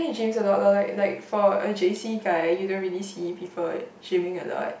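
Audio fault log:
No faults are audible in this speech recording.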